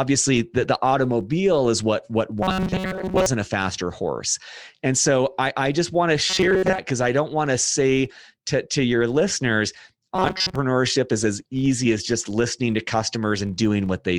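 From start to finish, the filter is restarted on every block. Each block opens with a small tick, forming a 43.1 Hz buzz that fits a 1024-sample block.

At 2.43 to 3.26 s, 6.30 to 6.78 s and 10.16 to 10.56 s, the speech turns robotic and metallic with a rigid 188 Hz buzz. Repeated short buffers are the likely cause.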